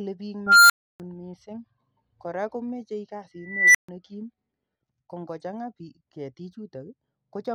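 At 0.47–1.0 s and 3.41–3.89 s, an unstable filter's recursive output diverges. A tone near 1.5 kHz, then near 2 kHz, swells, clips and cuts to brief silence, unlike sustained feedback howl.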